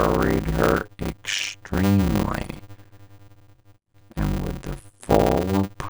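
Block size mismatch (padded) throughout: each block, which fits a 256-sample write, is zero-filled to a longer read, causing a 100 Hz buzz and speech slowed to 0.533 times speed.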